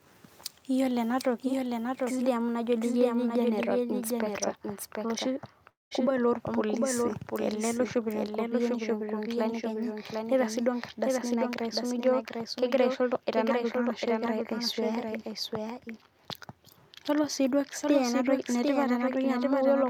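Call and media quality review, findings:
Doubled audio track, whole clip. A second full-band copy trails the original by roughly 0.7 s, about 5 dB down. No decay or room colour on it, so not an echo. Likely a second capture through a slower path or an edit holding two copies out of step.

Long network dropout, 5.69 to 5.93 s. About 220 ms of audio never arrives. The receiver stretches the last sound into a fading buzz or hiss, then a near-silent gap. Audio resumes with that chunk missing. Likely packet loss outlasting the concealment.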